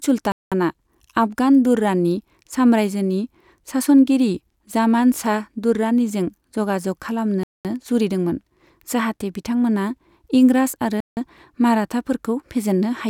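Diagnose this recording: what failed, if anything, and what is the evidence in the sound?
Playback stage: speech drops to silence at 0.32–0.52 s, 7.43–7.65 s (before "जुरिदोंमोन जाहाते बिथांमोना इंराज") and 11.00–11.17 s (after it), then resumes. This is likely a Bluetooth stall, with the headphone buffer running dry while delayed packets were resent.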